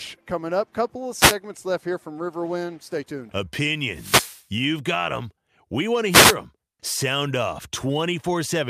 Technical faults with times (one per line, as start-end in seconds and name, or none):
1.18-1.35 wireless microphone noise hit
3.87-4.47 wireless microphone noise hit
6.10-6.36 wireless microphone noise hit